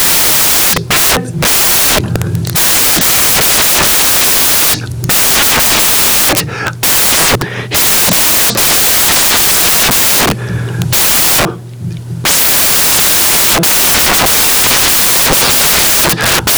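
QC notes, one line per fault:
Throughout: samples built from the wrong bytes. The speech is read with its bytes misassembled, so the rapidly changing low-order bits land in the most significant position of each value, producing loud, harsh broadband noise across the clip.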